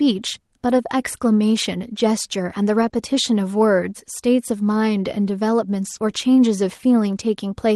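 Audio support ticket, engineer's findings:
Lost packets rebuilt from error correction at 0.65–0.79 s, 1.99–2.01 s, 2.81–2.87 s, 2.93–2.95 s and 5.85–5.95 s. Brief rough, noisier patches, no gaps. Component: Opus decoder playing in-band FEC copies. Lengths 80, 20, 40, 20 and 60 ms fit 20 ms packets.

Short concealed packet loss at 2.89–2.93 s. Brief smear of 20 ms, between two rebuilt stretches. Component: decoder packet loss concealment. A packet arrived too late, so the decoder stretched the preceding sound, then blended back into real audio.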